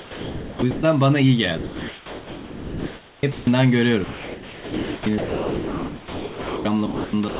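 Speech gives way to steady comfort noise at 0–0.62 s, 0.71–0.83 s, 1.58–3.23 s, 3.32–3.47 s, 4.04–5.06 s, 5.18–6.65 s, 6.86–7.13 s and 7.28 s to the end. This is likely sound dropped by the voice detector, which mistook speech for background and stopped sending.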